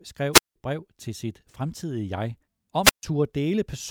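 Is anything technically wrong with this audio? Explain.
Yes. The speech has two wireless microphone squelch dropouts. The first runs from 0.32 to 0.56 s, just before "brev til sit", and holds a silent gap of about 179 ms. The second runs from 2.83 to 3.03 s, with a gap of about 141 ms. In each, the radio signal from the microphone weakens. Hiss rises briefly. Then the receiver's squelch cuts the output to near silence until the signal recovers and the speech comes back.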